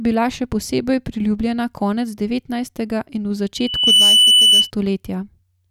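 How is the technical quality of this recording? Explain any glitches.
The recording has one clear glitch, a loudspeaker feedback squeal from 3.56 to 4.71 s. A single piercing tone at 3 kHz swells over roughly 0.4 s into a sustained shriek that stands around 10 dB above the speech before cutting off. It comes from a microphone picking up a loudspeaker it is feeding. At 3 kHz the loop's gain went above one, so that frequency kept reinforcing itself on every pass.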